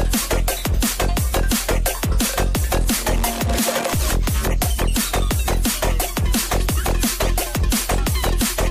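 No technical faults can be heard anywhere in the audio; there are no interruptions or disturbances.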